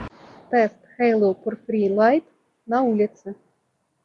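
Listening through the audio, nothing stood out as a technical problem at any point.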